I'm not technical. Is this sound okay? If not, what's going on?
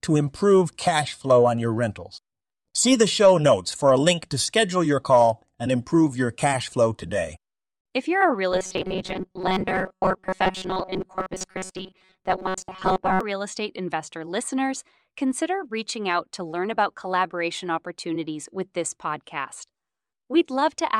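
No. From 8.52 to 13.21 s, right after "you're a real" and until "real estate investor listeners", the speech turns into a rigid, metallic buzz at a fixed pitch of 188 Hz that only loosely follows the words. This is robotic sound from repeated short buffers. Audio likely arrived too slowly, so the software kept replaying a tiny slice of about 5 ms for most of that stretch, while the real speech in between was lost.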